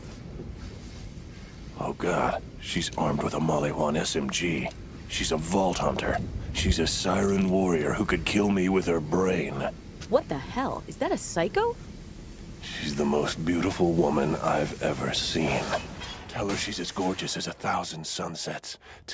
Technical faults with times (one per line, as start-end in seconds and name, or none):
none